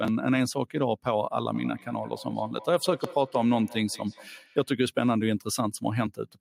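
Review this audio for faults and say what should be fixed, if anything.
From 1.55 to 4.74 s the speech is shadowed by a fainter copy of itself, returning at a steady interval of about a fifth of a second and peaking at about 17 dB below the direct sound. This is feedback echo between two devices: a second device in the room joined to the same call plays back the first microphone's signal, that microphone captures it again, and neither device's echo canceller can remove sound it did not play itself. To prevent it, make sure only one device in the room is connected to the call with its microphone and speaker active, or have everyone nearby use headphones.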